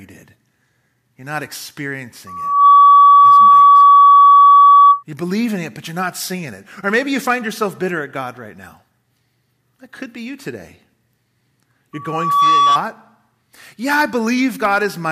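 At 2.27 s a loudspeaker feedback squeal starts: the microphone is re-amplifying its own loudspeaker, and at 1.1 kHz the loop gain tops unity, so that tone swells within roughly 0.4 s to about 15 dB over the speech and holds until 5.03 s. It returns from 11.93 to 12.79 s, slightly slower to build and about 10 dB up. A spectrogram shows a bright horizontal line at 1.1 kHz; the waveform shows a widening envelope.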